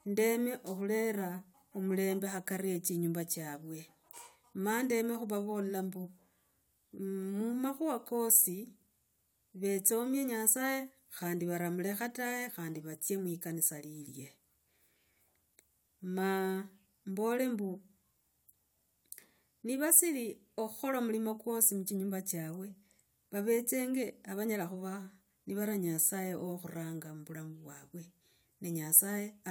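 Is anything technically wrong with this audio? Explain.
No, nothing is technically wrong with this audio.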